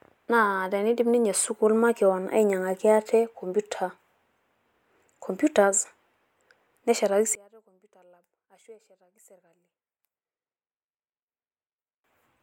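One channel inverted, from 7.35 s to 12.04 s in this speech recording: over that stretch the centred voice abruptly collapses by about 32 dB, leaving only a faint residue until the end of the span. The likely cause is one stereo channel with reversed polarity, so the material common to left and right cancels when the two are summed to mono, and only the small difference between them remains audible.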